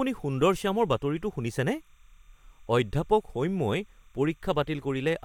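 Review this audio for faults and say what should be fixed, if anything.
A faint, steady chirping warble sits behind the speech throughout, about 40 dB down. This is timecode bleed: 30-frame code switching near 1 and 2 kHz leaking into the audio. Route timecode on separate, well-shielded cables and tracks, away from audio lines.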